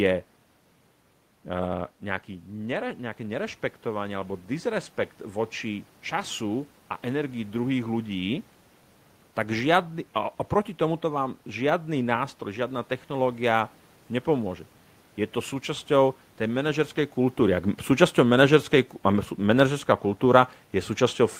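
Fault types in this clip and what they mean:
Automatic gain rising: after the input falls about 9 dB, gain climbs about 5 dB from 1.67 to 8.22 s, swelling room noise with the voice, unlike talker movement.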